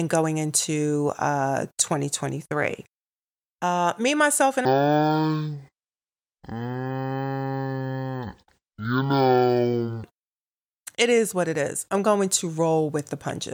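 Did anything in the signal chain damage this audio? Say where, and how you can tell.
Yes. From 4.65 to 10.04 s, after "me myself and", speech runs at half speed, an octave low. This is stereo read as mono, a sample-format conversion fault. Interleaved left and right samples play as one channel. A faint mirror image appears high up.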